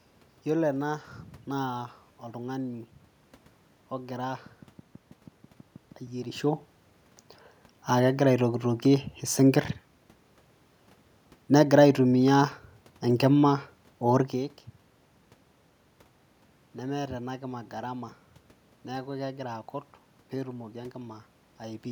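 A speech clip with a train of clicks from 4.46 to 6.24 s: about ten near-identical pulses at a steady 6.2 per second, peaking a few dB above the speech and audible over pauses too. The even spacing and matching shape set it apart from random crackle or a single dropout pop. The likely cause is interference from nearby equipment or a faulty connection or power supply. The room noise and the level shifts from the talker moving are in the recording itself.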